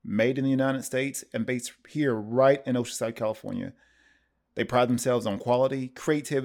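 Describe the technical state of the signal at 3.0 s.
At 3.0 s the speech signal is intact, with no audible technical fault at that moment.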